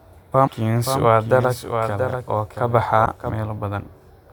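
At 0.43 to 0.49 s, damaged data in a compressed stream makes a brief glitch. The decoder misreads corrupted frames, loses sync and searches for the next frame header. From 0.85 to 3.30 s, a doubled audio track appears. A second full-band copy trails by roughly 0.7 s, somewhat quieter, starting and stopping abruptly. A slower second capture path is the likely cause. At 3.02 to 3.07 s, another damaged stretch produces a similar blip.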